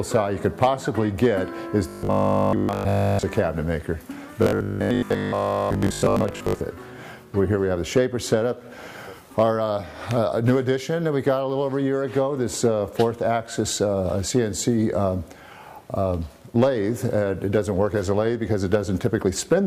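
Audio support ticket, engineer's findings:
Robotic sound from repeated short buffers, 1.89–3.23 s. Rigid metallic buzz at 50 Hz, whole span affected, no fresh audio between repeats. Fits a 20 ms buffer looping.

Same fault, 4.43–6.61 s. Same 50 Hz buzz across most of the span, some real audio still getting through.

Likely component: starved input buffer. Playback fills each gap by repeating the last 20 ms block, and that repeat period fixes the pitch.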